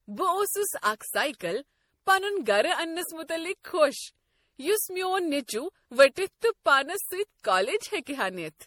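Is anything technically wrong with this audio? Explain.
Yes, there's generation loss running through the whole speech clip. The swirly, hollow smearing and blurred consonant attacks sound worse than one encode would give, which fits something like 64 kbit/s MP3 likely re-encoded around five times, each pass requantising on a shifted frame grid.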